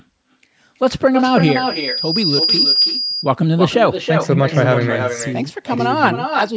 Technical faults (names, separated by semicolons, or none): echo with no canceller; loudspeaker feedback squeal